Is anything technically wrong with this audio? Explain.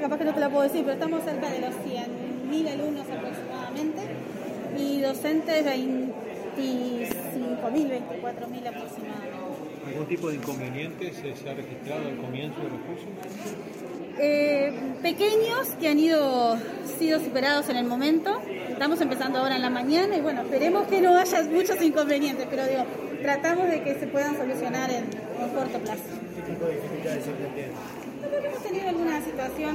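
Yes. From 7.78 to 8.63 s there are four brief ticks, the longest about 1.5 ms. These are CD scratch ticks: once per disc revolution, a scratch destroys more data than error correction can rebuild, so the player patches or mutes those samples.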